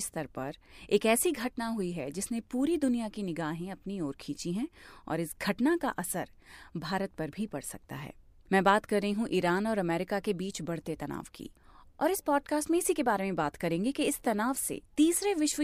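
Speech, with no audible faults.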